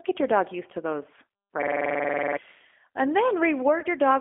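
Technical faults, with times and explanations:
Throughout: G.729 codec. The speech is rebuilt at 8 kbit/s from a vocal tract filter, a pitch predictor and a handful of pulses per frame. It sounds plainly rough and synthetic, and it is held to a line band of 250 Hz to 3.5 kHz.
3.80 to 3.86 s: VoIP packet loss concealed by the speech codec. About 20 ms of audio went missing, which fits a single lost packet. The decoder stretched its last pitch and filter into a fading sound, and the sound stays weakened briefly afterwards while later frames rebuild.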